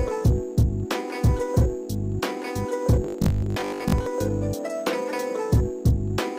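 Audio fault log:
3.04–4.08 s, robotic sound from repeated short buffers: a 50 Hz metallic buzz covers most of the sound. Likely a 20 ms chunk repeated while fresh audio lagged.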